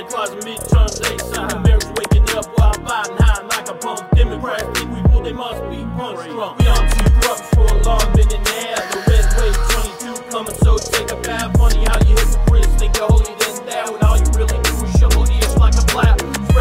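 No technical faults can be heard anywhere in this recording.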